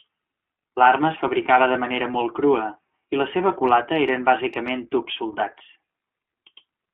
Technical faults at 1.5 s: iLBC codec; lost iLBC frames

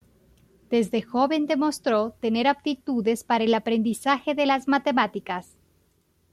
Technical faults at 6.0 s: none

